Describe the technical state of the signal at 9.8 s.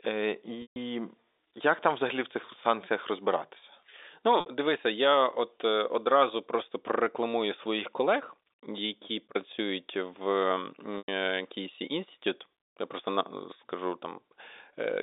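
At 9.8 s the signal is intact, carrying the narrow telephone band of G.711 coding with no fault present.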